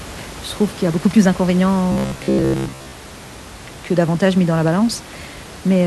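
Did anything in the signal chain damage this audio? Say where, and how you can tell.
Yes. From 1.92 to 3.00 s the speech turns into a rigid, metallic buzz locked at about 67 Hz, with the words still roughly traceable underneath. This is robotic sound from repeated short buffers, likely a driver or buffer stage starved of new audio, looping the last block of roughly 15 ms (one over 67 Hz) while most of the real signal in that stretch is skipped. The room noise, about 18 dB below the speech, is part of the recording.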